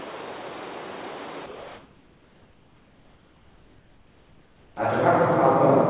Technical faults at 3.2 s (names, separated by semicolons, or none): comfort noise in place of the background